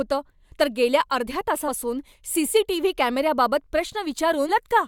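Right after "तर गेल्या अर्ध्या" at about 1.67 s there's a quick blip, and another at 4.48 s. That's damaged data in the compressed stream: the decoder hits corrupted bytes, misreads the frame, loses sync and has to hunt for the next header.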